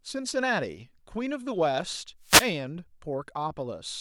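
From 2.21 to 2.53 s a short burst of static swishes over the speech, a wireless microphone noise hit from the FM radio signal fading.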